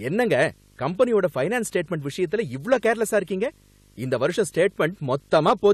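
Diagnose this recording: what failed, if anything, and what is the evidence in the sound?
Video or display buzz in the analogue wiring runs throughout: a 50 Hz field-rate buzz with hash plus a 15.6 kHz line tone, roughly 30 dB below the speech.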